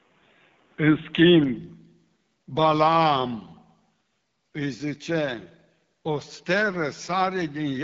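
From the start to 1.57 s the speech is dull and narrow, with a faint added hiss far below the voice. Then the fuller sound arrives with no gap and no clear level jump, which points to an input switched to a poorer device. A spectrogram shows a lower ceiling that lifts abruptly.

Throughout, the AMR wideband (HD Voice) codec at 8.85 kbit/s leaves the speech plainly rough and raspy. At this low rate, its pulse-excited vocal-tract model cannot capture fine detail. The spectrogram shows smeared harmonics and an upper band of noise-like fill, with nothing above 7.6 kHz.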